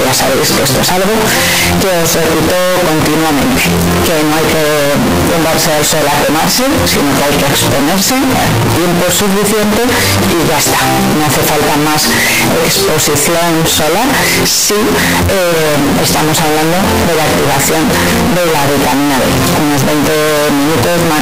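Float read as integer runs throughout all 21 seconds. The audio is extremely loud and harsh, its waveform flattened into a nearly square shape sitting at an almost fixed, high level, with quiet passages and background noise pushed up to the same level as the main sound, though the underlying pitch can still be traced. The likely cause is 32-bit float samples being interpreted as 32-bit integers, so each sample's sign and exponent bits, rather than its true amplitude, dictate the level.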